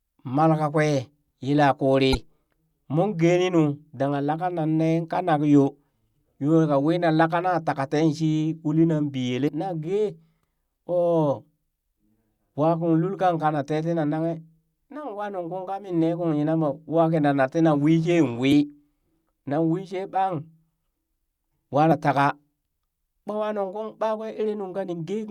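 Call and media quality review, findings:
Damaged data in a compressed stream: short chirp/blip bursts, about 40–50 ms each, at 2.11–2.15 s, 9.45–9.49 s, 18.48–18.52 s, 21.88–21.92 s. Decoder stage: corrupted frames misread, sync lost until the next valid frame header.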